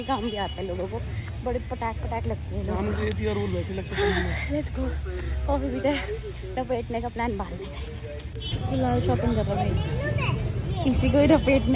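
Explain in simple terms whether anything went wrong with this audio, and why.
Nothing stood out as going wrong when listening to this audio.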